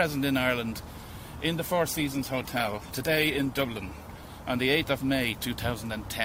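A call bitrate drop runs from 1.94 to 4.33 s. The encoder codes coarsely, muffling and roughening the sound, which fits a fall from 64 to 17 kbps.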